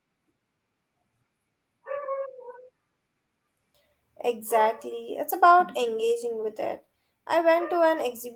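Nothing stood out on listening to this speech recording, which came through a call path with the Opus codec.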